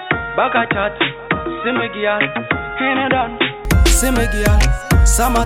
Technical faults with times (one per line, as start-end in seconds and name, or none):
0.00-3.65 input switched to a poorer device